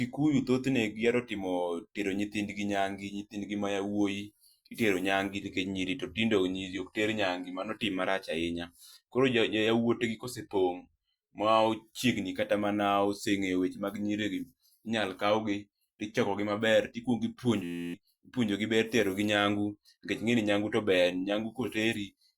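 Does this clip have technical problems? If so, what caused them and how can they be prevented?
Yes. A system hang loop runs from 17.64 to 17.94 s, just before "ipunjo gi ber tero". The driver stalled while the hardware kept replaying one 11.61 ms chunk, which fits a 512-sample buffer. That produces a steady 86.1 Hz buzz and drops roughly 0.3 s of speech. Prevent it by giving the audio thread real-time priority and updating or replacing the stalling driver.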